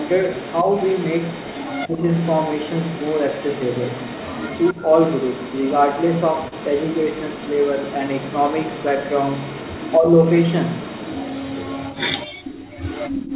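From the start to 9.98 s, an echo leak is likely: the far end's echo canceller let part of its loudspeaker pickup through, so a delayed copy of the speech trails it by about 269 ms, roughly 15 dB down, heard as a delayed repeat of the voice.

Where both sides talked at once, the canceller likely could not separate its own talker from the echo, so speech suppressed in double talk follows. At 1.86–2.04 s and 9.97–10.1 s the speech dips by around 15 dB, and at 4.73–4.85 s by around 10 dB. Each is a brief dip in the voice.

At 6.48–6.54 s, a short stall from a late packet: the jitter buffer ran dry, the last sound was stretched by 40 ms until the packet arrived, and nothing was lost. It is heard as a momentarily held sound.

The echo leak returns from 10.24 to 12.27 s, now about 272 ms behind and only around 10 dB below the speech, so it is more audible.

From 12.28 to 12.44 s, background gated by the echo canceller: the canceller clamped the microphone while its loudspeaker played, pulling the room sound down by about 36 dB for roughly 150 ms, a sudden hole before the ambience returns.

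From 12.44 s to the end, the echo leak continues at about 273 ms delay and around 10 dB down.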